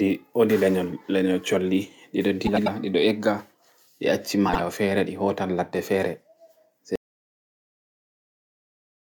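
At 2.47 to 2.68 s, after "colli ɗiɗo" and before "ɗiɗo egga", frames are out of order: two adjacent 96 ms blocks were decoded in swapped order, giving a garbled flutter. The same fault recurs at 4.48 to 4.60 s, after "ɗi acci" and before "fere ɗi hootan laɗɗe", with 48 ms blocks exchanged. No time is lost in either case.

From 6.96 s to the end, the speech drops out to silence. The signal cuts off mid-flow and is replaced by silence with no room tone, likely from a lost input or link while recording continued.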